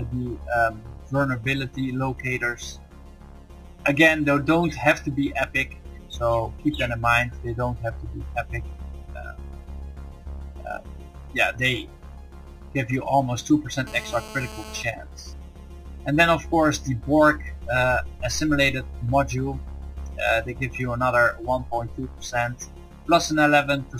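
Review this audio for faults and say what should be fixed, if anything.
There's a GSM phone buzz from 13.87 to 14.83 s, a hard, raspy tone at 216.7 Hz, with a stack of harmonics sitting about 15 dB below the signal and nothing to do with the audio itself. A 2G handset on a call was close enough that its radio bursts got rectified somewhere in the audio circuit, so it holds nearly steady for that stretch. Keep phones well away from the mics and cabling, or switch them to airplane mode, and you won't have to fix this afterwards.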